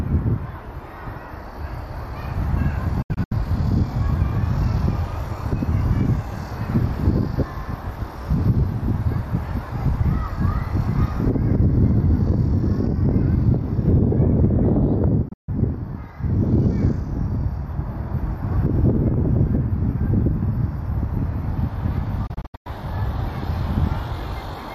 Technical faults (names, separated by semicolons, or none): digital broadcast dropout